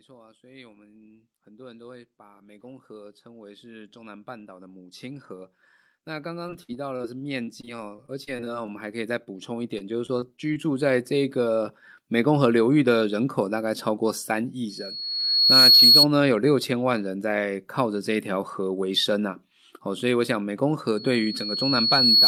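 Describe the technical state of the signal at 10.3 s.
Repeated packet loss (robotic sound) runs from 9.78 to 10.58 s. Several short holes, none longer than about 20 ms, are patched by extending the preceding sound, giving choppy speech with pieces missing. Automatic gain rising is also underway from 0.05 to 12.38 s: the gain control is steadily lifting a too-quiet input by about 26 dB in total, so speech and background swell together.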